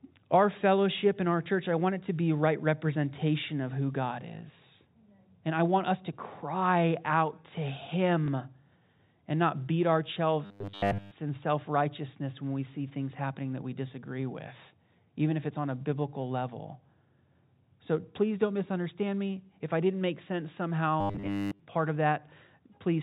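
At 8.26 s and again at 10.14 s, just after "and not beat our", there is a small blip. This is packet loss with the last packet repeated: one 20 ms packet went missing each time, and the receiver replayed the previous one to fill the gap.

From 10.45 to 11.11 s, between "and not beat our" and "in self righteousness when", the speech turns into a rigid, metallic buzz at 100 Hz that only roughly follows the words. The same thing happens from 21.01 to 21.60 s, after "I didn't make sense" and before "part of", where most of the stretch is affected. This is robotic sound from repeated short buffers, likely caused by audio arriving too seldom. A short chunk is looped while the real audio is skipped, and the 100 Hz buzz fits a 10 ms buffer. Throughout, the G.711 telephone coding limits the sound to the narrow telephone band.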